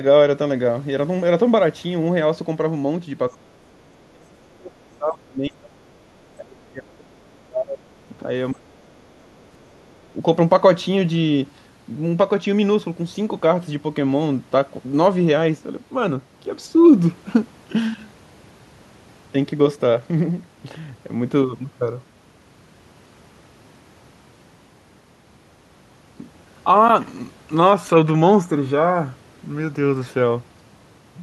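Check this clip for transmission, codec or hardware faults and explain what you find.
Two kinds of fault are audible, both in the first 10.2 seconds.

Speech suppressed in double talk occurs at 3.31–3.54, 3.98–5.91, 6.35–7.89, 8.19–8.28, 8.51–9.15 and 9.72–10.16 s. The echo canceller likely mistook both sides talking at once for echo and clamped the signal. The talker's speech dips by up to roughly 35 dB and drops out in pieces, with the 8.19 s dip much shallower.

The other side's voice leaks through at 3.72–3.94 s. The canceller likely left residual loudspeaker echo in the microphone feed, so a faint second voice is heard, roughly 40 dB below the talker.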